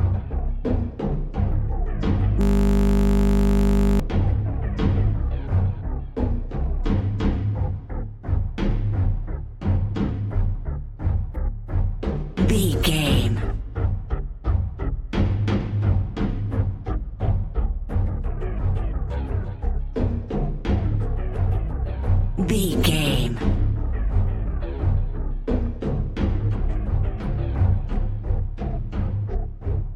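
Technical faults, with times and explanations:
2.41–4.00 s, system hang loop: playback froze and a 20 ms buffer repeated 79 times, producing a steady 50 Hz buzz instead of the audio.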